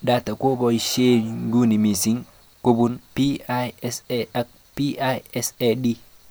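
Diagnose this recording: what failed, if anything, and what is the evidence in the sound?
Nothing failed; no fault is audible in this recording.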